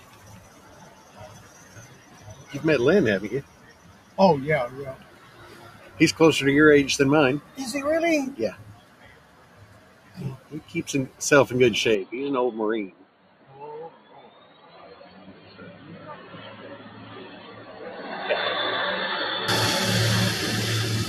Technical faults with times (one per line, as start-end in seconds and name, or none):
0.00-21.08 noise suppressor applied to music or sounds
0.00-2.44 sound cut by the noise suppressor
3.44-4.17 sound cut by the noise suppressor
4.97-5.91 sound cut by the noise suppressor
7.42-7.57 sound cut by the noise suppressor
8.71-10.52 sound cut by the noise suppressor
11.95-19.48 input switched to a poorer device
12.92-13.51 sound cut by the noise suppressor
13.90-14.77 sound cut by the noise suppressor
15.09-15.56 sound cut by the noise suppressor